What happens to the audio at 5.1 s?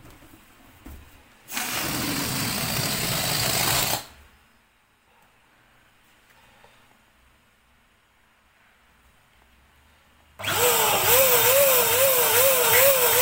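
Nothing goes wrong at 5.1 s; the audio plays through that moment intact, with no dropout, click, distortion or other fault to be heard.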